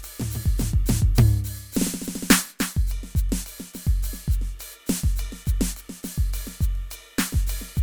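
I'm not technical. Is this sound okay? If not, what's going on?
Yes, this music recording is technically sound, with nothing in the signal that points to a recording or playback problem.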